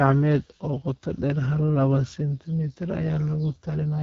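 From start to end, the speech carries the sound of the AMR wideband (HD Voice) codec. Nothing sits above about 7.5 kHz. The codec models the voice as pulses driving a vocal tract filter up to 6.4 kHz and fills the top band with shaped noise. Here the damage is plainly audible. The speech sounds rough and raspy. That fits one of the lowest rates, around 8.85 kbit/s.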